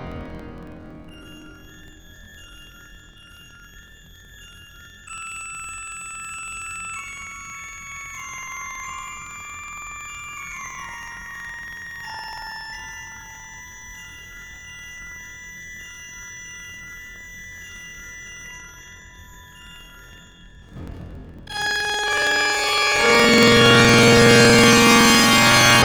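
From start to finish the sound plays an octave high with a steady flutter near 21.5 Hz, the signature of planar audio read as interleaved. Each block of roughly 46 ms, which fits 2048-sample blocks, stores one channel's samples followed by the other's. Read as alternating pairs, each block plays twice at double speed, left then right. Unlike a plain speed-up, the pacing stays correct, and the flutter tracks the block rate rather than any modulation.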